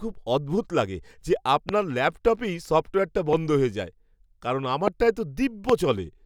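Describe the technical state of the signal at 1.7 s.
A single sharp pop lands on the speech between 1.69 and 1.71 s, right after "খুব অদ্ভুত লাগে যে" and just before "ল্যাপটপেই সফ্টওয়্যারটা". It stands out roughly 15 dB above the surrounding signal while the talking carries on underneath it. This loud pop is likely a brief voltage spike, from a switch, static discharge or a driver glitch, that got added into the signal path and was then rounded off by the circuitry downstream.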